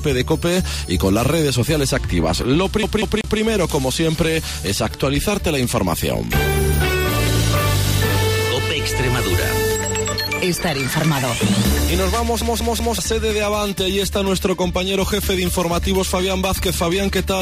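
At 2.83 to 3.40 s and again at 12.41 to 12.98 s, the audio shows a CD stuck on one turn: the laser jumps back one track, so a 0.19 s slice repeats three times with a brief mute at each jump. That rigidly even stutter separates it from irregular network dropouts.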